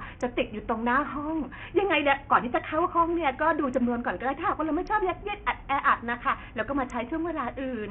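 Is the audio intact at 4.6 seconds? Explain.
No. At 4.6 s the speech carries heavy damage from what is likely Bluetooth SBC compression, present across the whole clip. The coarse sub-band coding starves the upper bands of bits, so the treble thins and flickers under a gritty grain, which fits a low bitrate near 48 kbps.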